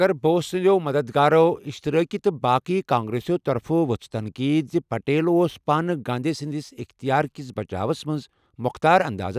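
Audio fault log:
No audible faults anywhere in the speech recording.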